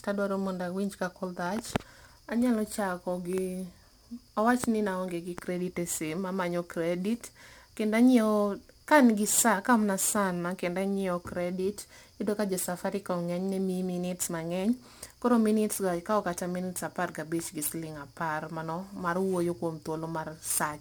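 A speech recording with crude rate conversion running through the entire clip. A gritty, inharmonic fizz rides on the louder and brighter parts of the voice, sitting roughly 20 dB below the signal. It points to a 44.1 to 48 kHz conversion done by nearest-sample picking, repeating samples on a fixed pattern with no anti-imaging filter. The resulting periodic timing error generates tones unrelated to the speech.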